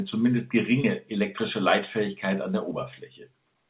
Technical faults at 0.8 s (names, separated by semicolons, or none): short concealed packet loss